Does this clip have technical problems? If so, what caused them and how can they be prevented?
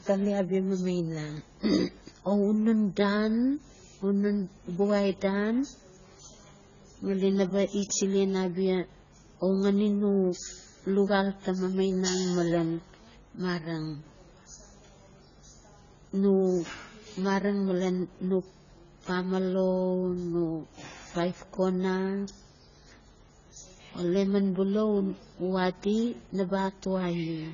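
Yes. Throughout the speech, the sound is dull and smeared, with nothing above 7 kHz, and sibilants and sustained sounds carry a warbling, fizzy texture where the spectrum has been heavily thinned. The cause is likely AAC compression, specifically AAC-LC at a rate that fits a bitrate around 16 kbps. With so few bits per frame, the encoder drops the upper band and quantises the remaining frequency lines so coarsely that spectral gaps and substitute noise become audible. To prevent it, encode speech at a substantially higher AAC bitrate, or use a codec designed for low-rate speech.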